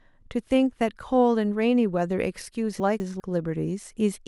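It's a short speech clip with chunks out of order between 2.8 and 3.2 s: two 200 ms blocks play swapped, one arriving a chunk late, so nothing's lost but that stretch sounds jumbled, with three hard joins.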